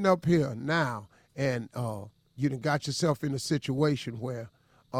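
A speech clip with regular clicks from 0.29 s to 4.95 s, recurring every 1.16 s, about five in all. The pattern is consistent with clock drift buffer slips, most likely from two devices running on independent clocks. Their rates differ by roughly 300 ppm, so the buffer between them gradually fills or drains until a short block of samples, on the order of fifteen, is dropped or repeated. Each slip breaks the waveform and produces a click.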